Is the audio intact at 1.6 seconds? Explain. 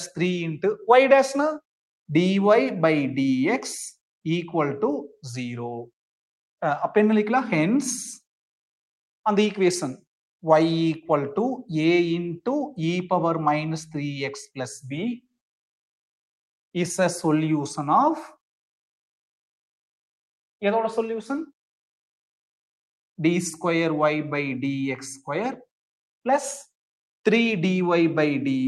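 Yes, at 1.6 seconds the audio is intact, with no dropout, click, distortion or other fault audible at that moment.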